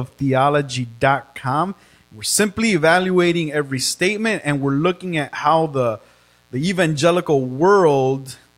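A steady, raspy buzz sits under the speech for the whole clip, roughly 40 dB below it. This is mains buzz: sharp switching spikes on a 60 Hz supply leaked into the signal path, spreading harmonics from low bass up into the kilohertz range.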